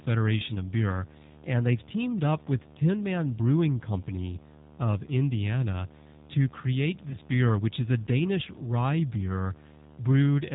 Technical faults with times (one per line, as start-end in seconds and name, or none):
0.00-10.54 video or display buzz
0.00-10.54 G.729 codec
7.09-7.17 VoIP packet loss concealed by the speech codec